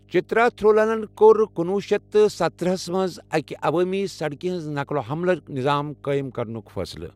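A speech recording with mains hum running from start to finish: a steady low tone at 50 Hz sits underneath the talker, roughly 30 dB below the speech, and stays constant through pauses. It points to a ground loop or a nearby transformer feeding the 50 Hz power line into the signal path. Unlike broadband rumble or wind noise, which wander in level and have no clear pitch, this is a fixed, pitched tone.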